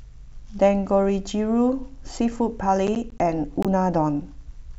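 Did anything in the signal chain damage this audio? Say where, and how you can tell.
Yes. From 2.87 to 3.2 s the speech breaks into a gritty crackle of short, hard-edged silent gaps, which points to processor overload crackle at the driver or buffer stage. The gaps suggest buffers of around 20 ms, with a handful missing their deadlines and replaced by silence.

At 3.63 to 3.66 s there is a clean hole of about 21.3 ms, after which the speech resumes as if it had kept playing. That fits a single lost frame on the wireless link, likely a Bluetooth dropout where a packet arrived too late.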